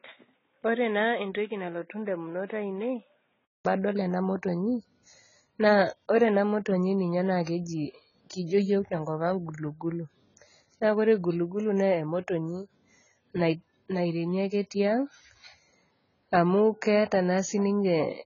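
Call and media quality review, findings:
AAC compression, whole clip. Speech dull and smeared, sibilants fizzy and warbling, nothing above 7.1 kHz. Likely cause: AAC-LC encoder at a low rate, consistent with roughly 16 kbps; heavy quantisation leaves spectral holes and substitute noise. Unlike plain low-pass filtering, the band below the cut-off also swirls and smears.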